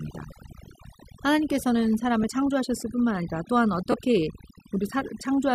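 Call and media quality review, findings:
Overdone noise removal, whole clip: background pulled down and broken into twinkling specks. Noise suppressor set too aggressive. Bands near its noise estimate gated hard, taking quiet speech detail with them.

Lost LE Audio frames at 0.31 s, 2.23 s and 3.92–3.94 s: brief noisy smears where tone should continue. The first two are about 10 ms each, fitting one lost frame. The last is about 20 ms, fitting two. The LC3 decoder concealed each gap by replaying the previous spectrum with randomised signs.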